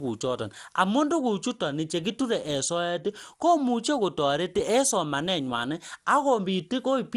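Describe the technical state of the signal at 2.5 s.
At 2.5 s the speech is carrying generation loss, present throughout the clip rather than confined to that moment. The likely cause is the audio being decoded and re-encoded around ten times through a lossy codec whose character points to MP2 at about 96 kbit/s. Each pass requantised the signal on a shifted frame grid, so noise piled up. The result sounds swirly, smeared and hollow, with softened consonant attacks and nothing above 15.2 kHz.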